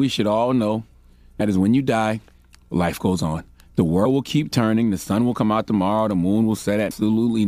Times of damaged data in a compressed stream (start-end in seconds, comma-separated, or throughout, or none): 1.40, 4.04, 6.90